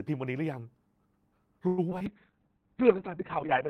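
From 1.67 to 1.80 s, packets were likely held up and the jitter buffer ran dry. This call audio freeze stretches the last speech sound into a fading buzz or hiss for about 100 ms, and the speech then resumes with nothing lost.

At 1.90 s, about 20 ms of speech never reached the decoder in time. The short concealed packet loss is patched from the preceding sound and heard as a brief smear.

At 1.99 s, roughly 70 ms of speech is dropped while later audio was already waiting. In this skip ahead, playback jumps forward with almost no gap, joining the two sides abruptly.

From 2.07 s to the end, the bandwidth estimate collapses and causes a call bitrate drop. The sound turns rough and muffled, which fits a fall from around 32 kbps to around 6 kbps, and the top end is cut from 20 kHz to 4 kHz for about 1.4 s at its worst.

Between 2.31 and 2.67 s, the jitter buffer rebuilt its reserve by repeating pitch periods. 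This jitter buffer slow-down adds 68 ms, so speech runs at 84% speed at unchanged pitch and sounds drawn out.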